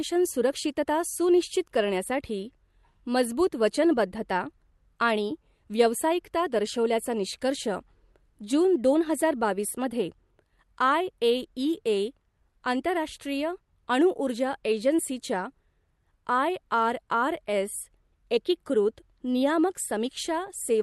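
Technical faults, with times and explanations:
Throughout, clock drift between sender and receiver: the sending device's audio clock runs roughly 5 percent fast, so the jitter buffer receiving this speech keeps filling faster than it plays out. To keep latency bounded, the receiver must keep throwing away small slices of audio. The effect is a delivery that feels slightly hurried and unsteady rather than smoothly paced, carried over a call path whose top end stops near 12 kHz.
0.02 to 20.78 s, repeated timing corrections: because the sender runs ahead, the receiver trims short pieces all the way through this stretch, always removing audio and never inserting it, at uneven intervals. Taken together the cuts amount to playback at about 105 percent of the original pace. Each edit is small, so it comes across as a faint hiccup or a brief jump in the rhythm rather than an obvious gap.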